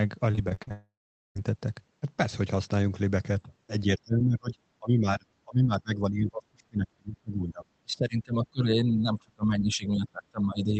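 From 0.31 to 0.72 s, repeated packet loss (robotic sound) chops the speech: seven short gaps, the longest 38 ms, patched by repeating the previous sound, so it turns choppy and broken.

From 0.72 to 1.37 s, a long network dropout follows. The last sound stretches into a fading buzz, then roughly 0.43 s of silence. Audio resumes with that stretch lost.

Speech suppressed in double talk, likely from an echo canceller ducking the talker while the far side speaks, causes dips at 3.43–3.50 s (about 10 dB), 3.84–4.55 s, 4.79–5.27 s, 5.44–7.65 s (up to about 30 dB) and 7.83 s to the end. These make the voice fade, dull or break up.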